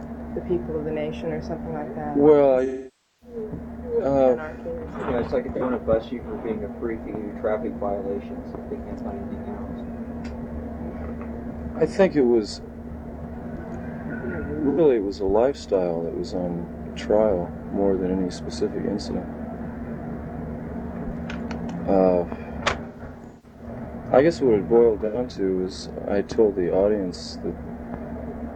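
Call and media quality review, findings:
AAC frame loss with concealment at 2.65–3.36 s, 5.56–5.61 s, 14.68–14.80 s, 22.84–23.67 s and 25.05–25.17 s. Decoder rebuilding missing frames from last good spectrum. Longest gap near 2.65 s, about 555 ms, loss long enough to fade toward silence and recover. 22.84–23.67 s: scattered losses totalling about 470 ms, longest run about 150 ms, sounding smeared. Remaining three events brief: short noisy, phasey patches.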